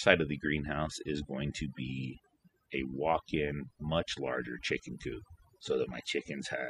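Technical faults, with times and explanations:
Throughout: overdone noise removal. A noise reduction process has been pushed well past a sensible setting, so any frequency band whose level sits close to the tool's noise estimate is cut hard or gated off entirely. The low-level parts of the speech fall below that threshold along with the background noise, leaving the gaps between phrases near-silent apart from isolated twinkling specks where stray bands flicker on and off.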